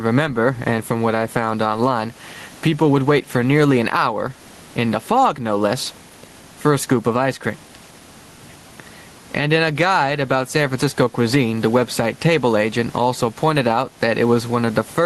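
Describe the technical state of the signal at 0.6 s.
At 0.6 s, gain pumping: the gain swings by around 15 dB, pulled down on each loud sound so loud and soft parts end up closer in level and the sound is squashed, likely from excessive gain and a fast limiter, throughout; the waveform envelope heaves under each loud sound.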